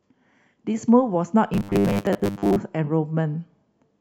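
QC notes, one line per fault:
1.54–2.56 s, robotic sound from repeated short buffers: speech becomes a metallic 100 Hz buzz, likely a 10 ms chunk looped over most audio; spectrogram shows rigid, evenly spaced harmonics.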